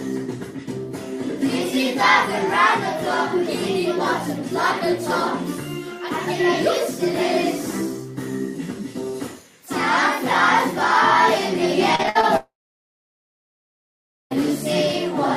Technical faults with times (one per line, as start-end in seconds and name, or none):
11.95-12.25 repeated packet loss (robotic sound)
12.37-14.33 long network dropout